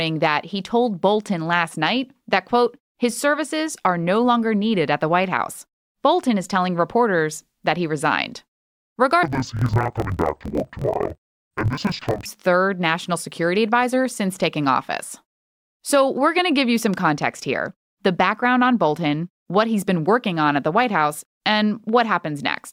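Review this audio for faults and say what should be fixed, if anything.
From 9.23 to 12.28 s, just before "third national security advisor", the speech drops an octave and turns doubled, choppy and buzzy at 41.7 Hz. This is interleaved audio read as planar: each 24 ms block of alternating left and right samples was split into halves, so both channels play at half speed. To prevent it, make the reader's channel-layout flag match the producer's interleaved format.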